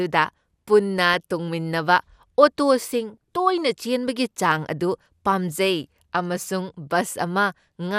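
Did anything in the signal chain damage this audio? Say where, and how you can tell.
Yes, DAB burbling in reception: at 1.13–1.17 s and 3.14 s, just before "ꯇꯣꯏꯅ ꯆꯦꯟꯕꯒꯤ ꯆꯥꯡ ꯑꯗꯨ", noise blips appear as isolated sub-band blocks on a spectrogram, where uncorrected bit errors corrupted the MP2 audio data.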